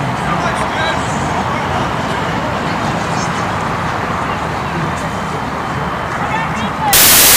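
For the last half second, from 6.93 s to the end at 7.37 s, the audio collapses into loud, harsh broadband noise, the sign of samples built from the wrong bytes. The reader assembles each sample with its bytes misordered or misaligned, so the rapidly fluctuating low-order bits land in the most significant position.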